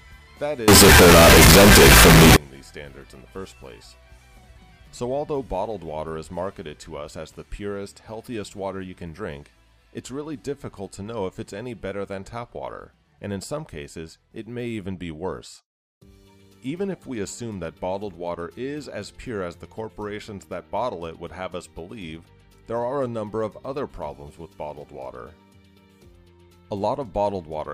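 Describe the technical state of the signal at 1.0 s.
Float read as integer, from 0.68 s to 2.36 s: the sound turns very loud and harsh, nearly square at an almost fixed high level, with background noise as loud as everything else, though pitch stays traceable. Likely cause: 32-bit float samples decoded as 32-bit integers.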